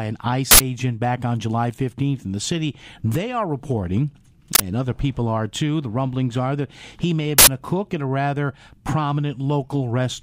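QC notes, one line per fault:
0.51–0.60 s, 4.55–4.60 s and 7.38–7.48 s, uninitialised buffer: each event is a sudden, loud burst of digital noise where a buffer was played before any audio was written into it, so stale memory came out as samples. The first and third bursts last about 93 ms, which fits a 4096-sample block at 44.1 kHz. The middle burst lasts about 46 ms, which fits a 2048-sample block. A dropout would leave silence and a click would be a single instant. These bursts are loud noise that fills a whole block length.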